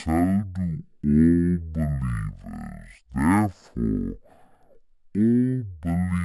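From start to finish, the speech suffers a stereo read as mono fault: interleaved left and right samples are taken in turn as one channel. Playback is half speed and a full octave (12 semitones) low, with a fainter mirrored image in the upper spectrum.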